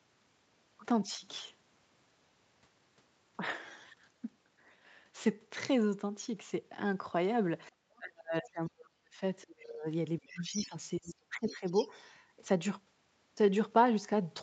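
A speech recording over a call, with the talker's voice repeatedly pushed down while a second voice is present. This is speech suppressed in double talk, heard at 7.70–7.81, 7.98–9.21, 9.45–9.86, 10.19–10.75 and 11.00–11.64 s. The dips range from mild to near silence, deepest around 8 to 9 s. The likely cause is an echo canceller that cannot separate the talker from loudspeaker echo and mutes both. The other side's voice is also leaking through at 10.28–10.76, 11.06–11.14 and 11.46–11.88 s. It sits well below the talker, in short scraps. This is likely residual echo that the canceller left in the microphone signal.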